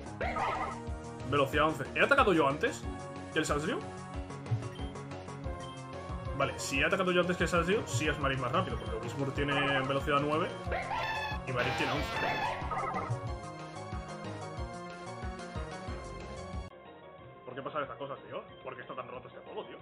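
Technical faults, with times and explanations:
16.68 to 19.82 s, input switched to a poorer device: after a 20 ms gap the sound drops roughly 10 dB, turns dull and gains new background noise about 30 dB down, likely from a narrower-band microphone. Spectrogram: nothing above 3.8 kHz. Waveform: brief flat gap, smaller envelope.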